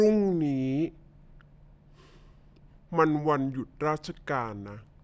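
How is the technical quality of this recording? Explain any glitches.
The recording's main problem is that it plays back slow and low the whole way through. It's a wrong sample rate: the audio runs at about 0.73 times its proper speed, which fits 22 kHz material being played at 16 kHz with no conversion. Pitch drops by the same ratio, about 5.5 semitones, so the speech sounds deep, dragged and sluggish from start to finish.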